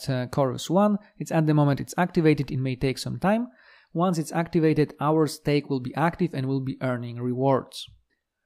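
No technical faults can be heard anywhere in the audio.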